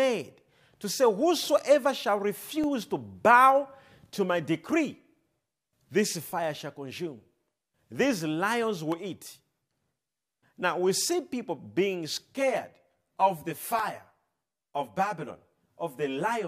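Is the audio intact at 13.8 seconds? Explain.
No. From 12.34 seconds, just after "we see people being", to the end, there is channel delay (comb filtering). One copy of the speech arrives about 10 ms late and is summed with the other. Shared content cancels at evenly spaced notches starting near 40 Hz, giving a hollow, phasey or doubled sound.

There is also a block of digital silence at 13.79 seconds. It lasts 4.35 ms. The audio drops to silence and returns with no fade, probably from an unfilled output buffer or invalid values. A gap this short is heard as a tick or dip.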